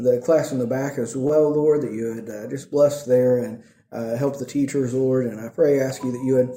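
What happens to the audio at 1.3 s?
A short concealed packet loss occurs from 1.27 to 1.31 s. About 20 ms of audio failed to arrive in time, so the receiver bridged the gap by extending the preceding sound for roughly 17 ms before blending back into the real signal. It comes across as a brief smear or wobble.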